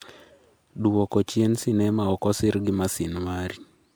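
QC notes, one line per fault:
throughout, generation loss: likely about four rounds of lossy re-encoding, consistent with MP3 near 128 kbit/s, stacking quantisation noise into swirly, hollow speech with blurred onsets.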